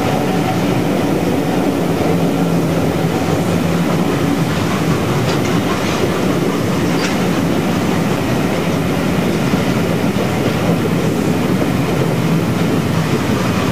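Throughout the audio there is grainy distortion that moves with the signal, with quiet passages turning gritty and the faintest parts sputtering or dropping out. This is low bit depth without dither, most likely a reduction to about 5 bits by truncation, leaving an error only about 20 dB below the signal. At 8.17 s a block of digital silence lasting 5.8 ms cuts the sound out and back with no fade, short enough to be heard as a tick or dip rather than silence. Its length fits a 256-sample buffer that was not filled in time.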